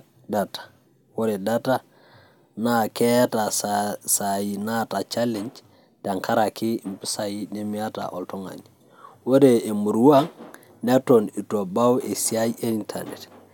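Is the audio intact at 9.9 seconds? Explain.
Yes, the speech at 9.9 seconds comes through intact, with no dropout, click, distortion or other fault at that moment.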